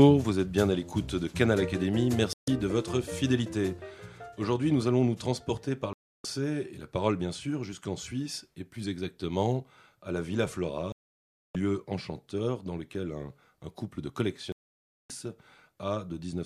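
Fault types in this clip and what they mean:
digital broadcast dropout: the sound cuts to silence four times, lasting 0.14, 0.31, 0.62 and 0.58 s, as the receiver muted through lost or corrupted frames.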